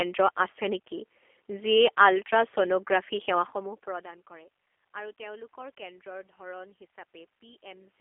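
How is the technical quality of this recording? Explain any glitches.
The recording carries one clear fault, G.729 codec damage, present throughout. The speech is confined to a telephone band of 300 Hz to 3.4 kHz. It is rebuilt from a coarse filter-and-pulse model, consistent with an 8 kbit/s G.729 stream. So it sounds rough, buzzy and synthetic. Room noise is audible, and the level shift near 3.5 s is the talker moving.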